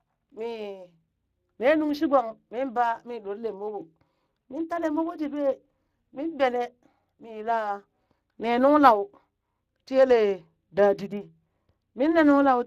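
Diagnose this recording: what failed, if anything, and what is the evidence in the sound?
The codec stage failed: Speex compression, plainly audible across the whole speech clip, sounds hoarse and noisy, pointing to roughly a 22 kbps setting starved of excitation bits, with nothing above 15.2 kHz.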